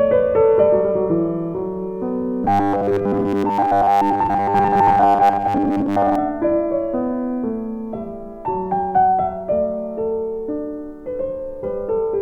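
From 2.44 to 6.15 s the sound turns into a rigid, metallic buzz at 100 Hz, the robotic sound from repeated short buffers, which only loosely tracks the original. The likely cause is audio arriving too slowly, so a 10 ms chunk is replayed while fresh material is skipped, with roughly seven-tenths of the span made of repeats. A spectrogram shows evenly spaced horizontal lines every 100 Hz, and the waveform shows identical 10 ms segments in sequence.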